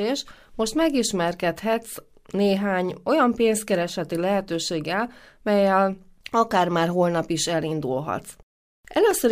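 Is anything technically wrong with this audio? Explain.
No, nothing technically wrong is audible anywhere in this speech recording.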